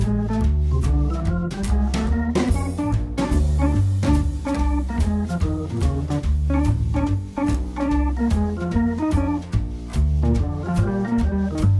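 No technical faults can be heard anywhere in this audio.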